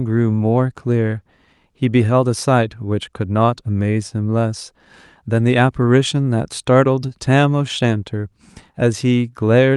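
Nothing here stands out as a fault: the speech comes through the call path as expected, with the ordinary coding character of a call and the top end easing off around 12 kHz.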